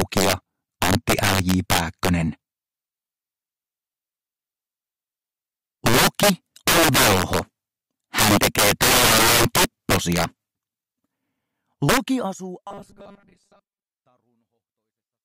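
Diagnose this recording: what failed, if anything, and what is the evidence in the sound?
Integer overflow at 0.00–0.33 s, 0.82–2.09 s, 5.86–6.30 s, 6.68–7.39 s, 8.19–10.24 s and 11.89–11.97 s, a failure in sample-format conversion or a fixed-point gain stage. Loud passages break into violent cracks, harsher than clipping. Peaks driven about 3 to 13 dB past full scale wrapped to the opposite sign instead of being held at the limit, throwing each one across the entire range.

Robotic sound from repeated short buffers at 12.67–13.87 s, in the driver or buffer stage. The sound collapses into a rigid metallic buzz pitched at 200 Hz that still loosely tracks the underlying audio. The likely cause is late-arriving blocks, with the software looping the last fragment, about 5 ms, which fits that 200 Hz pitch. Most of the real audio in that stretch is discarded rather than played.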